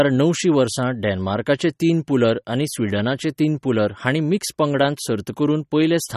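From start to end, the speech carries plainly audible codec damage, likely from MP3 compression. Nothing is heard above 13.8 kHz, so the top of the treble is missing. The damage fits a low bitrate of about 34 kbps. At that rate the encoder runs short of bits. It drops weak frequency lines, and these flicker in and out between frames. The result sounds watery and swirly.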